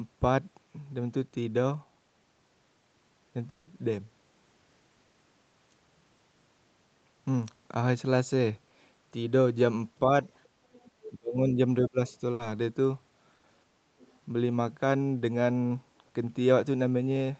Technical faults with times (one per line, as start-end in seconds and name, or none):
3.49-3.69 long network dropout
5.07-5.15 burst of packet loss
10.05-10.11 speech suppressed in double talk
10.23-10.45 other side's voice leaking through
10.75-11.10 other side's voice leaking through
11.10-11.99 speech suppressed in double talk
12.07-12.17 other side's voice leaking through
12.33-12.41 burst of packet loss
13.35-13.45 burst of packet loss
13.99-14.19 other side's voice leaking through